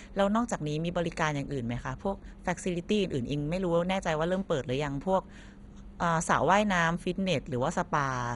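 Throughout the speech the sound is dull, with nothing above 11.2 kHz, and carries a heavy gurgling, granular roughness as upper bands flicker in and out. This is likely MP2 compression starved of bits, which fits a low rate around 56 kbps.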